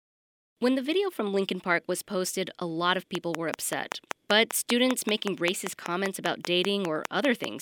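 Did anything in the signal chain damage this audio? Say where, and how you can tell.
Yes. A train of clicks, evenly spaced at 5.13 per second, runs from 3.15 to 7.45 s, about 20 dB above the speech. Likely analogue interference, a faulty connection or a faulty power supply.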